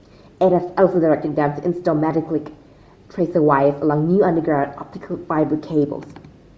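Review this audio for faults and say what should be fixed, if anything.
Bluetooth LC3 compression, throughout the clip: the speech has a plainly audible breathy, grainy edge in its upper range, where fine detail gives way to a hiss-like texture. The likely cause is the LC3 codec of Bluetooth LE Audio running at a low bitrate. In each short frame it discards much of the upper spectrum and fills the gap with shaped noise. The amount of damage fits about 32 kbps with 7.5 ms frames. To prevent it, record over a wired connection or set the Bluetooth link to a higher-bitrate LC3 configuration.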